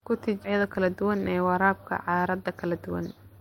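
A speech recording with a skip ahead at 0.44 s: about half a second of audio is simply missing, and the two sides join almost directly with no silent gap. That lack of silence distinguishes it from a dropout, where playback stalls or fills the hole. Audio that was late or overflowed from the buffer was discarded in favour of sound already waiting. From 0.53 s to 3.40 s a jitter buffer speed-up follows. The receiver repeatedly trims pitch-period-sized pieces to shed excess buffered delay, roughly 200 ms in all, so the speech runs about 8% fast and sounds hurried. The pitch stays unchanged, which separates it from a resampling or clock-rate error that would raise the pitch along with the tempo.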